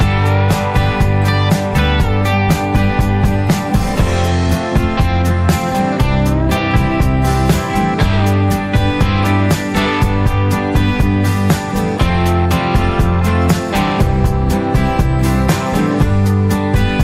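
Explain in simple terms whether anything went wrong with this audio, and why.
Nothing went wrong with this audio; no technical faults can be heard anywhere in it. There are no dropouts, jumps or sudden changes at any point, so there's nothing to explain or fix.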